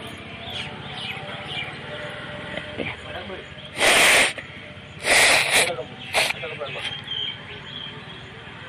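At 3.81 s the sound runs into hard clipping until 4.26 s, and again from 5.08 to 5.68 s, driven about 15 dB and about 13 dB past the ceiling. Peaks are sheared flat, spraying harmonics high up the spectrum, so every loud moment turns into a harsh, buzzy fuzz. Unlike gentle saturation, which rounds peaks and thickens tone, the edge here is abrupt and gritty, and it vanishes the instant levels drop.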